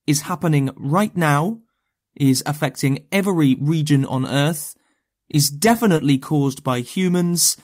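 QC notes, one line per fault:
5.97–6.01 s, short concealed packet loss: about 20 ms of speech never arrived in time, so the receiver bridged roughly 12 ms by extending the preceding sound before blending back into real audio, leaving a brief smear where detail briefly drops out.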